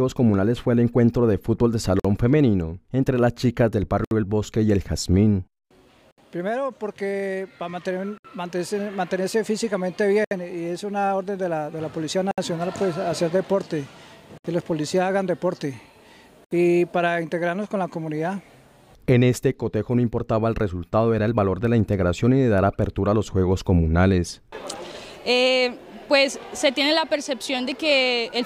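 At 1.99 s there's a 50 ms hole, then 67 ms holes at 4.05, 6.11, 8.18, 10.25, 12.31, 14.38 and 16.45 s: a gap at a join of encoded pieces. Two-second chunks were encoded separately and joined untrimmed, so encoder delay and end padding leave silences with smeared edges before the sound picks up again.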